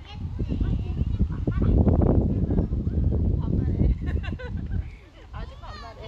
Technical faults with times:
none

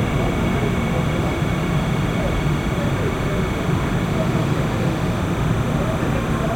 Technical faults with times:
0.00-6.55 timecode bleed

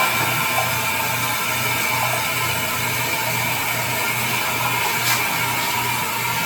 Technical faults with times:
0.00-6.45 generation loss

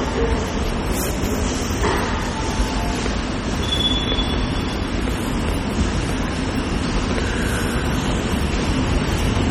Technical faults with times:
0.00-9.50 MP3 compression

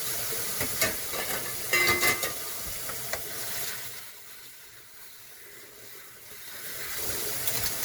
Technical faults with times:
0.00-7.84 generation loss
3.59-4.18 zipper noise
6.23-7.07 zipper noise

